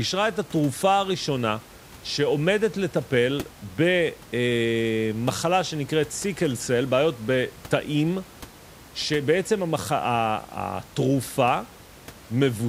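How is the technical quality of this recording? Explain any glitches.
No technical faults are audible.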